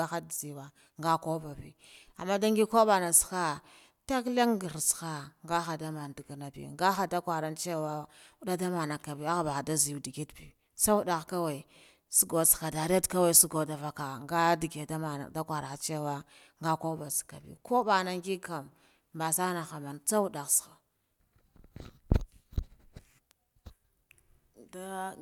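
Nothing in the recording stood out as a technical fault on listening.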